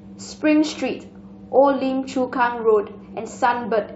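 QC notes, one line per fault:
3.18 to 3.20 s, damaged data in a compressed stream: a brief glitch breaks into the speech for about 20 ms. Corrupted bytes in the encoded stream made the decoder misread the frames there and lose sync until it found the next frame header. Unlike a plain dropout, which leaves silence or a smooth gap, this glitch points to bad compressed data being decoded.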